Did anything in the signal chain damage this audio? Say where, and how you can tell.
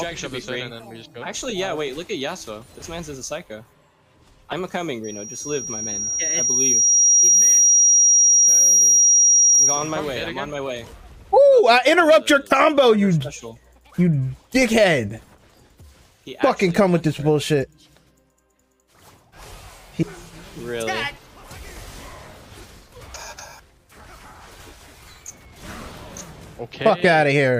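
Yes: a loudspeaker feedback squeal from about 5.04 s to 10.01 s. A pure tone near 5.7 kHz swells over a couple of seconds and settles a few decibels above the rest of the sound before it stops. The damage happens in the acoustic and analogue path, ahead of any converter or codec. The microphone picked up the loudspeaker it was driving, and at 5.7 kHz the loop gain passed one, so that single frequency kept reinforcing itself.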